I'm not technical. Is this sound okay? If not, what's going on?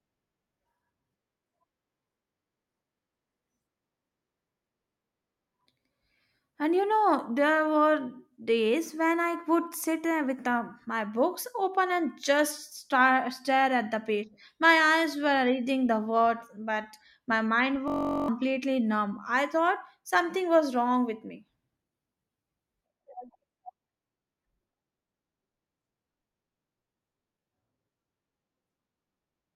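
No. From 17.88 to 18.28 seconds there is a system hang loop. The computer briefly froze, and the sound hardware replayed one tiny 21 ms slice of speech over and over. That makes a steady buzz, and about 0.4 seconds of speech is lost.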